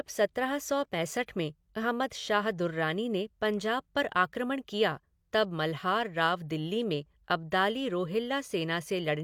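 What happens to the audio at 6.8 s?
Nothing goes wrong at 6.8 s: the speech continues intact through that moment, with no dropout, click or distortion.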